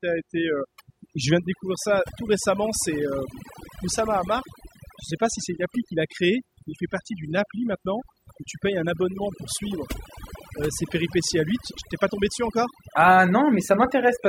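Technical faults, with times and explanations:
Throughout: overdone noise removal. The noise reduction was set too aggressively on this speech, muting frequency bands that sit close to its noise estimate, taking the quieter parts of the voice with them. The background drops and breaks up into twinkling specks.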